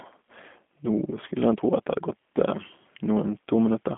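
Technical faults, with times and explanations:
Throughout, G.729 codec: the speech is held to a telephone band of roughly 200 Hz to 3.5 kHz, with nothing above 3.8 kHz. It has a rough, synthetic edge because each 10 ms frame is rebuilt from a vocal tract filter, pitch predictor and sparse pulses at 8 kbit/s. That model-based grain separates it from a simple band-limited line.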